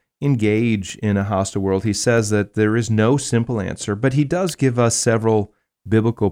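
At 4.49 s a single sharp snap cuts through the speech, an electrical switching spike peaking fairly high, around -10 dBFS. It is likely a nearby switch or discharge arcing into the line. Unlike a dropout or digital glitch, the speech carries on uninterrupted beneath it.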